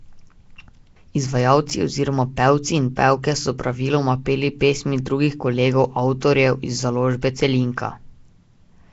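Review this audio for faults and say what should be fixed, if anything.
Throughout, the speech has a rough, hissy halo and a smeared, underwater quality, with nothing above 7.7 kHz. This is likely Nellymoser compression at a low bitrate, perhaps 32 kbps. To prevent it, record or export with a modern codec at an adequate bitrate.

From 1.69 to 1.71 s, just before "oziroma pevci in pevke", chunks out of order cause a brief jumbled moment. A 10 ms chunk arrives one chunk late, so it plays out of sequence with hard joins. To prevent it, reorder buffered chunks by sequence number or timestamp before playback or writing.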